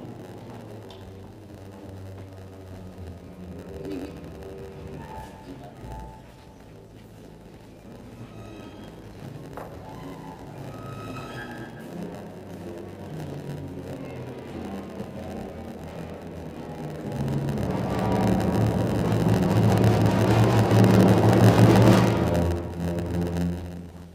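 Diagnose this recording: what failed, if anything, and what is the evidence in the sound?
A block size mismatch (padded) at the driver or buffer stage runs the whole length of the recording. A steady buzz at about 92 Hz sits under the audio throughout, and everything plays back slower than it should, at 0.919 times normal speed. One stage hands over shorter blocks than the next stage expects, and the shortfall in each block is filled with zeros. That brief silence repeating in every block is the buzz, and the added time slows the playback.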